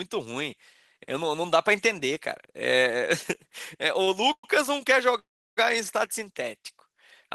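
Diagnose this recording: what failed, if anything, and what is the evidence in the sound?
The failure is in the network stage. A short stall from a late packet appears at 4.03 to 4.08 s: the last sound is held for 37 ms with a faint buzz, then continues from exactly where it left off. Nothing is skipped, so the stream simply runs 37 ms later than before. The jitter buffer ran dry for one packet interval and the receiver stretched the existing sound rather than cutting to silence, which is what separates this from a dropout.

Two call audio freezes follow, at 4.32 to 4.44 s (113 ms) and 5.19 to 5.58 s (377 ms). In each, the held sound turns to a fading buzz and then goes silent, for about 70 ms and about 340 ms respectively. The audio then resumes with nothing lost, adding 113 ms and 377 ms of delay. The likely cause is packets being held up in transit, emptying the jitter buffer for much longer than a single late packet would. 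The decay into silence and the lengths distinguish these from the brief stall.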